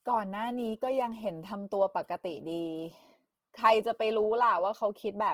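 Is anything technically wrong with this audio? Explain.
Yes. Throughout, the speech sounds rough, grainy and noisy, likely from Opus compression in music mode filling starved bands with noise, pointing to a bitrate near 16 kbps.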